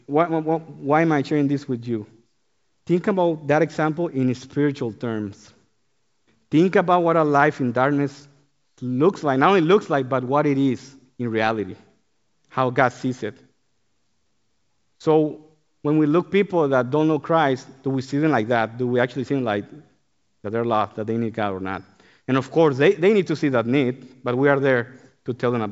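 No technical faults can be heard anywhere in this speech.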